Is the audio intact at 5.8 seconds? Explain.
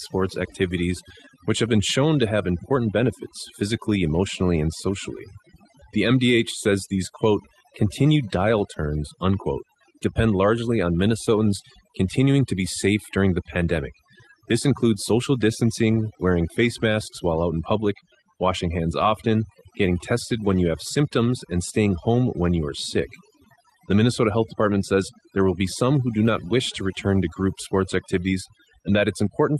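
No. At 5.8 seconds the speech is affected by overdone noise removal, which runs through the whole clip. The suppressor pulls individual frequency bands down to nothing whenever they come near its noise estimate, taking quiet parts of the voice with them. The background drops and breaks up into twinkling specks. On a spectrogram the gaps show as dark holes with scattered isolated bright dots. Separately, content above 12 kHz is absent, fitting an Opus call path.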